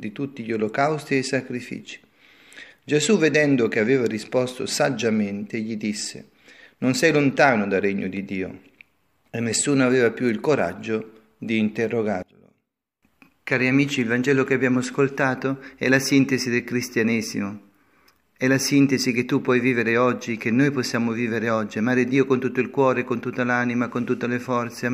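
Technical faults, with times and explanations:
12.23–13.03 s, one channel inverted: the sound drops by about 21 dB. One channel likely has reversed polarity, so content common to both cancels in the mono sum.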